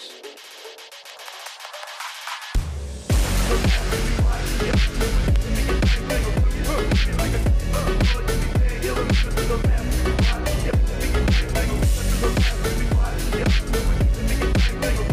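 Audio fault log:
5.36–5.38 s, loud pop: A single sharp pop lands on top of the sound, roughly 10 dB above it. The sound carries on underneath. It is likely a sudden voltage pulse, from a plug, switch, static or driver glitch, entering the signal chain.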